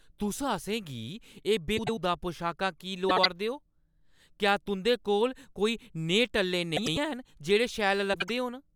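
Frames out of order at 1.77–1.99 s, 3.09–3.26 s, 6.76–6.98 s and 8.13–8.30 s: two adjacent blocks of about 96 ms or 72 ms swapped, consistent with runs of four or three frames. Each stretch becomes a garbled flutter, and no time is lost.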